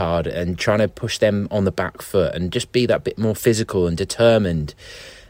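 A faint hiss and grainy roughness ride on the speech for the whole clip, thickening on louder, brighter syllables and dropping away in pauses. This is sample clock jitter: an unsteady converter clock, wandering by around 2 microseconds, mistimes samples, leaving error roughly 40 dB below the signal.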